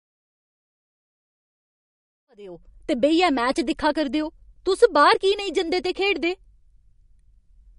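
Speech that sounds watery and swirly throughout, with smeared consonant attacks and nothing above 10.6 kHz, is most likely the result of MP3 compression. The encoder, starved of bits at a rate that fits roughly 43 kbps, cut off the treble and dropped weak frequency content unevenly from frame to frame. A smooth fade-in around 2.5 s reaches full level by 2.82 s.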